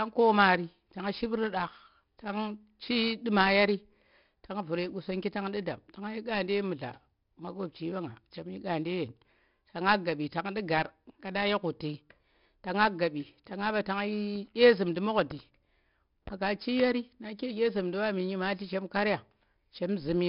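Speech with 4-bit ADPCM compression throughout: a gritty hiss rides on every loud syllable and collapses in pauses, and attacks distort, with nothing above 5.3 kHz, which fits an 11 kHz rate near 44 kbps. Unlike perceptual codecs, there's no swirly, warbling artefact.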